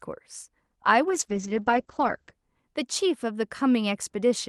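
From 1.09 to 2.37 s, a call bitrate drop muffles the speech. Highs above 8 kHz vanish, and the coarse, watery coding points to roughly 9 kbps Opus.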